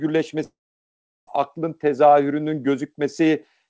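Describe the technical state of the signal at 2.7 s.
At 2.7 s the speech signal is intact, with no dropout, glitch or distortion, just the ordinary bandwidth of the call path, which carries nothing above 8 kHz.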